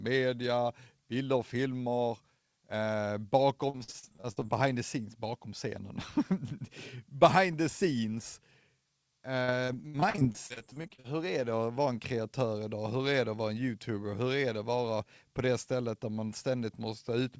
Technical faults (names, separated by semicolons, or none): repeated packet loss (robotic sound)